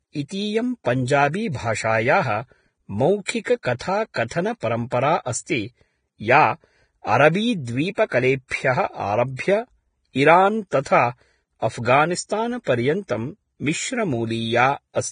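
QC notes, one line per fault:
throughout: Vorbis compression. The speech has nothing above 9.7 kHz, and what's left up top sounds hissy and grainy, with roughened tones and soft, blurred consonant attacks. That's most likely heavy Vorbis coding. The encoder drops everything past its cut-off, then quantises the remaining treble so coarsely that the fine detail turns into noise of about the same energy. The amount of damage fits a low bitrate somewhere around 23 kbps.
3.25 to 3.28 s: pre-echo. A short hiss of about 27 ms creeps in just before a sharp attack, and the attack itself lands soft and smeared. The transform codec spreads its quantisation noise evenly across the whole block. Because the attack falls late in that block, noise sized for the loud part spills into the quiet moment before it, so you hear the hiss arrive ahead of the sound.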